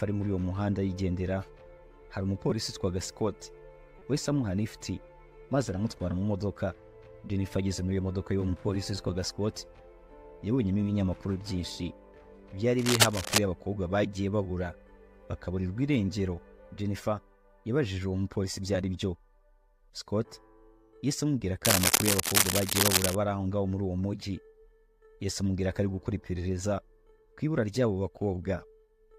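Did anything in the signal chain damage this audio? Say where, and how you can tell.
Yes. Corrupt frame decoded at 2.5 s and 3.99–4.02 s: the codec played damaged frames anyway, giving a loud blip, then a much fainter one.

Cable scratch noise at 12.79–13.39 s and 21.65–23.16 s: rustling bursts at or above the sound's level, likely a worn cable or connector in the analogue wiring.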